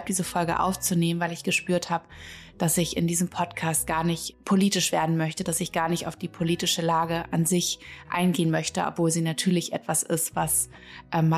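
Nothing is technically wrong with this clip.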